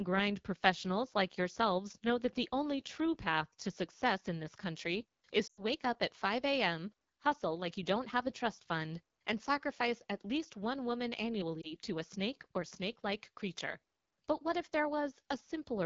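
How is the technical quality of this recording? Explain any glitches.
Quality is poor: the speech carries audible low-bitrate codec damage throughout, and two brief breaks occur where frames were lost.

AMR wideband (HD Voice) codec, throughout: the speech sounds rough and raspy, which fits AMR-WB at its 8.85 kbit/s mode. The model codes up to 6.4 kHz and fills the top band with shaped noise. Unlike narrowband telephone audio, the extended upper band still gives some airiness.

Lost AMR speech frames, 5.47 to 5.62 s and 11.61 to 11.75 s: the decoder repeated the last good pitch and vocal tract settings at falling gain. The first break suggests about 100 ms of missing frames and drops to near silence within two frames. The second, from a single lost frame, is a brief dip or warble. Unlike a plain dropout, neither break cuts to hard silence, and the speech comes back weak or rough for a moment.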